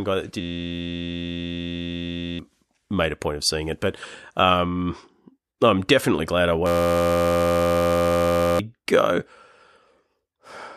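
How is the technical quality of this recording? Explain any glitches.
The recording has two clear glitches, both a system hang loop. From 0.41 to 2.39 s and again from 6.66 to 8.59 s, the speech gives way to a steady buzz at about 86 Hz. A tiny 11.61 ms slice of audio repeats while the system is frozen, which fits a 512-sample buffer, and about two seconds of speech are lost each time.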